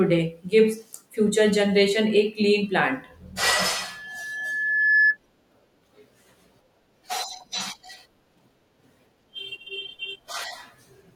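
A speech recording with a loudspeaker feedback squeal from 3.83 s to 5.17 s. A single tone at 1.7 kHz swells over roughly a second and ends up sitting around 5 dB above the speech. The microphone is picking up the loudspeaker it feeds, and near 1.7 kHz the loop gain has gone past unity, so that frequency keeps building on itself through the mic-to-speaker path until the amplifier limits it or the loop is broken.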